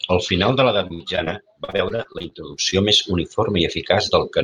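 A speech clip with repeated packet loss (robotic sound) from 0.87 to 1.28 s, just after "final de l'edat", and from 1.64 to 2.74 s. Missing packets were filled by extending the previous sound, giving choppy sound with pieces missing. Unlike a single dropout, the holes keep recurring.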